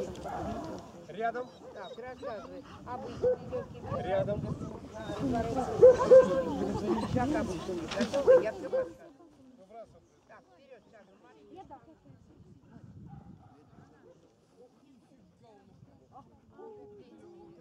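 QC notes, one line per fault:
8.36–9.24 s, zipper noise: the level drops by roughly 25 dB in 1 dB steps, about thirty a second, with no smoothing between them. Each sudden step puts a small click into the waveform, so a fast ticking rides on the sound throughout the fade.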